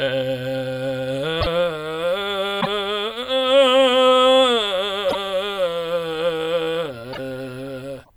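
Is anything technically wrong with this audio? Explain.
Yes. The music has five brief disruptions, at 1.40–1.47, 2.60–2.67, 5.08–5.15, 7.12–7.19 and 8.03–8.10 s. Each is a roughly 70 ms skip-ahead with a garbled onset. This likely comes from a broken MP3 bit reservoir: missing frames of about 26 ms leave later frames reading borrowed data from the wrong place.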